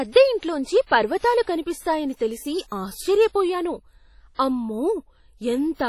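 From start to finish the speech has a ringing, washy texture, with a hiss that rises and falls along with the voice and nothing above 18.5 kHz. This is likely WMA compression, heavily damaging at what sounds like a low bitrate around 32 kbps: the transform codec smears its quantisation noise across long blocks and throws away weaker spectral detail, leaving a thinned, swirling quality rather than clean speech.

Four sharp onsets arrive with a brief hiss creeping in ahead of them and a softened, smeared attack: at 0.86 s, lasting about 54 ms; at 1.18 s, about 46 ms; at 2.68 s, about 34 ms; and at 4.35 s, about 43 ms. This is pre-echo. Each attack falls late in a coding block, so noise scaled for the loud onset is spread over the whole block, including the quiet stretch just before it.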